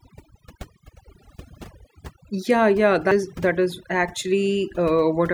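From the start and through the whole clip, the speech carries the marks of overdone noise removal. A noise reduction stage was pushed too hard, so each frequency band that sits close to its noise estimate is pulled down or shut off, and the softer parts of the voice are cut along with the hiss. The gaps fall to near silence sprinkled with twinkling specks. Unlike a plain low-pass filter, the loss flickers band by band rather than removing the top end evenly.

At 3.11 s there is a CD skip, right before "that is". A knock or a flaw sent the laser onto a different turn of the disc's spiral, so playback mutes very briefly and resumes from another point in the recording. It sounds like a small tick followed by an abrupt jump in the speech. What sets it apart from an ordinary dropout is that the audio does not pick up where it stopped. It continues from a displaced position, offset by whole disc turns.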